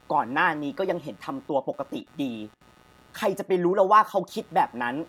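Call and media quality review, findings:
Computer activity noise, throughout the speech. Buzzy, scratching pulse train near 150 Hz, roughly 30 dB under the speech, varying with machine activity, not the talker. Probable component: shared ground. CPU, GPU or mouse load currents modulating the audio reference.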